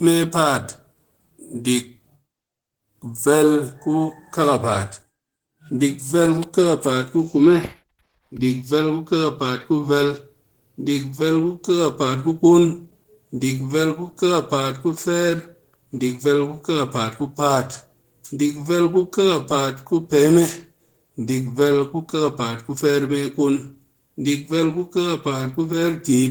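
Throughout the speech there is clock drift between sender and receiver: the sending clock runs slow, by roughly one and a half percent against the receiving side. Audio therefore arrives a little more slowly than it is played out, so the jitter buffer steadily drains and the receiver has to keep compensating. The result is a faint but persistent unevenness in timing that never settles, because the mismatch runs the whole length of the clip.

From 0.15 s to 26.17 s the receiver applies repeated timing corrections, each one duplicating a short slice of audio to refill the buffer. These edits all pull in the same direction, stretching the speech to about 99% of its original pace and adding something like 400 ms overall. They fall at uneven intervals, so if heard at all they come across as slight hiccups and a mildly unsteady tempo rather than as a regular pattern.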